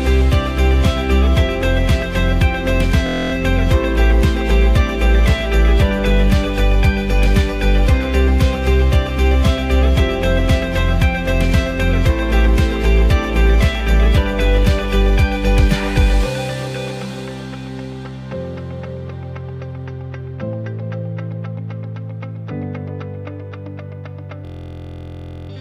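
System hang loop at 3.07–3.32 s and 24.45–25.50 s: one 23.2 ms slice keeps repeating as a 43 Hz buzz, which fits a frozen 1024-sample ring buffer.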